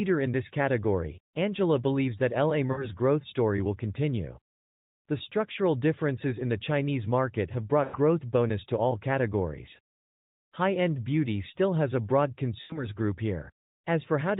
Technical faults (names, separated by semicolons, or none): lost AMR speech frames